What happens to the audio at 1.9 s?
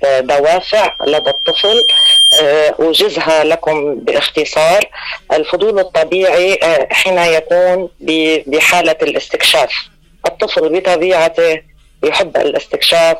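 At 1.9 s the audio is in the middle of a loudspeaker feedback squeal that runs from 0.55 to 2.49 s. A microphone is picking up its own loudspeaker, and the loop gain exceeds unity at 3.2 kHz. That tone swells over about a second and a half until it sits roughly 5 dB above the signal.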